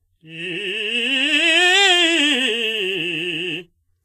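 A music clip with Vorbis compression damage throughout: the treble sounds hissy and grainy, tones are roughened and attacks smeared, which likely comes from encoding at a low rate, consistent with roughly 27 kbps. On a spectrogram, energy stops sharply at 14.2 kHz, with speckled, noisy patches below.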